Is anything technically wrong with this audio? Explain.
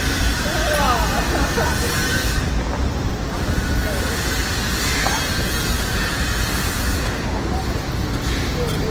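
Yes: Opus compression throughout. Likely low-bitrate music-mode Opus, with band energy held but detail replaced by folded or noise fill, leaving rough, grainy textures and a spectrogram smeared with noise-like speckle.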